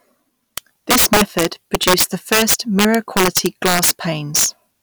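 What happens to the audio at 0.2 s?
At 0.2 s the speech is hit by integer overflow, present throughout the clip: driven about 12 dB too hot, a few percent of samples wrap to the opposite sign instead of flattening, giving violent cracks far harsher than the flat-topped buzz of clipping.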